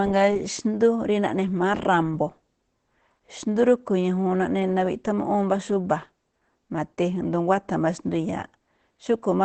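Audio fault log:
throughout Opus compression: the speech sounds muffled and hoarse, with nothing above 8.6 kHz and heavy codec damage rather than the watery swirl of MP3. The cause is likely the Opus encoder working in its SILK speech mode at wideband, modelling the voice instead of keeping the waveform. That rasp fits a very low rate around 12 kbps, and it sets this apart from a simple low-pass filter, which dulls without roughening.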